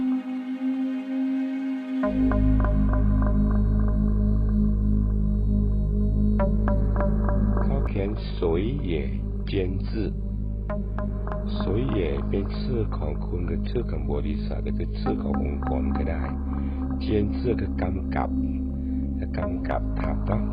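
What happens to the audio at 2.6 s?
Nothing goes wrong at 2.6 s; the audio plays through that moment intact, with no dropout, click or other fault.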